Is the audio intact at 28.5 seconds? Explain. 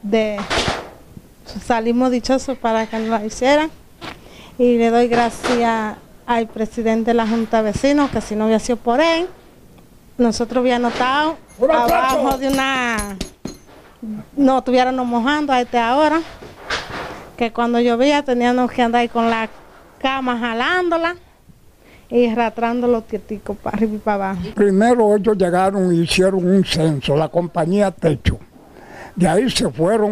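Yes, the audio at 28.5 seconds is intact, with no dropout, click, distortion or other fault at that moment.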